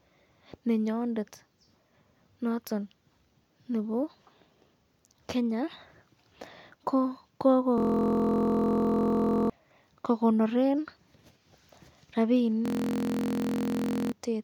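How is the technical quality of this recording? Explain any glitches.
The speech gets interrupted twice by a system hang loop, at 7.78–9.50 s and 12.66–14.12 s. The system froze while the hardware kept replaying a 23 ms chunk, which fits a 1024-sample buffer. That gives a steady 43 Hz buzz and wipes out about a second and a half of audio each time.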